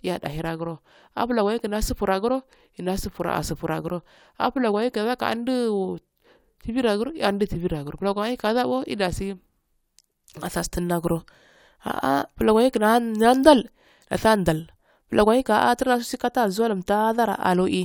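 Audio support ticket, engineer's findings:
Listened through the full speech recording and nothing stood out as a fault.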